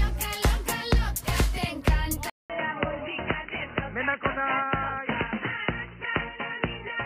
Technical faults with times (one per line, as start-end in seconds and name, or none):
2.30-7.05 input switched to a poorer device